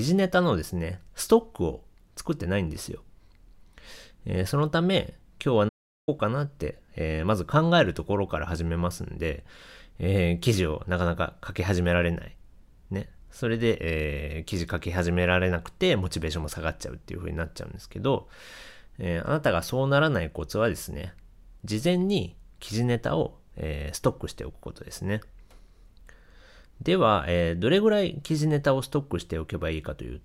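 At 5.68 s the player likely ran out of data or was blocked, causing a playback stall: the speech cuts to silence for about 390 ms, then resumes.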